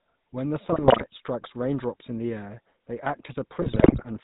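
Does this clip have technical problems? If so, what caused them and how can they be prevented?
Yes. Throughout the clip, the speech went through the GSM full-rate codec. That codec models the vocal tract as a filter and drives it with a sparse train of regularly spaced pulses, decimating the excitation to every third sample. The gritty, buzzy roughness fits its 13 kbps stream. Nothing above 4 kHz survives, so the speech sounds muffled as well as gravelly. Carrying the call over a wideband codec such as AMR-WB or a modern IP voice codec would prevent this.

There are also GSM bit errors from 0.72 to 1.05 s, just before "strikes raindrops in the", and again from 3.62 to 4.05 s. Corrupted bits got past the radio link's protection and into the decoder. Damaged filter, pitch and gain parameters then distorted the spectrum and level frame by frame, so the speech breaks into squawks, pops and gargling. 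The later burst is longer and has a higher error rate, about 5.0% against 2.4%. Stronger signal coverage, better channel coding, or muting corrupted frames instead of decoding them would prevent it.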